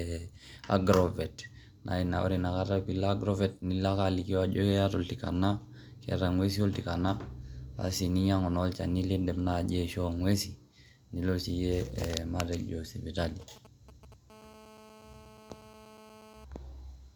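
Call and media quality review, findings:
GSM signalling bursts, 13.41 to 14.14 s: galloping dit-dit-dit of ticks and brief 217 Hz buzz fragments, roughly 20 dB under the speech. Nearby 2G handset in signalling exchange, radio pulses rectified in the audio front end. Unlike a call buzz, the bursts arrive in short grouped clusters, not as a continuous tone.

GSM phone buzz, 14.3 to 16.45 s: hard, raspy 217 Hz buzz rich in harmonics, about 23 dB below the speech, unrelated to the talker. Nearby 2G handset holding a call, transmitting 217 bursts a second, rectified by the audio circuitry. Steady and unbroken, unlike the clustered ticking just before it. It also differs from mains hum by its 217 Hz rate and edgy timbre.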